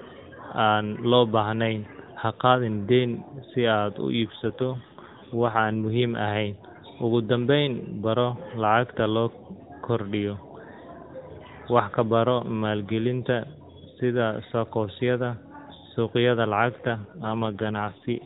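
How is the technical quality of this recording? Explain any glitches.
The speech comes through a narrowband mobile codec, with nothing above 4 kHz. It has two AMR rate drops. From 4.24 to 6.18 s, and again from 16.72 s to the end, the voice turns rougher and more synthetic. There is no gap and no change in bandwidth. The sound fits the codec stepping down from 12.2 to 5.9 kbps, giving up speech detail to protect against errors on a weak link.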